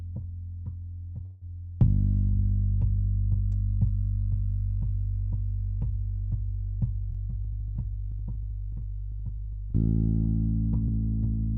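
From 1.25 to 1.44 s the sound stalls into a short fading buzz or hiss, then resumes where it stopped: a call audio freeze, likely from delayed packets draining the jitter buffer. From 7.1 to 9.7 s the audio runs slightly faster at unchanged pitch, about 103% speed. This is a jitter buffer speed-up, in which the receiver trimmed roughly 70 ms in small pitch-period cuts to reduce the built-up delay.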